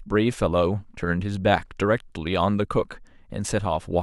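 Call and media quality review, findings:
Sample clock jitter, throughout. Faint hiss and roughness riding on the speech, strongest on loud and bright sounds, gone in pauses. Converter clock timing wanders about 1 µs rms, so error tracks waveform slope, roughly 45 dB below signal.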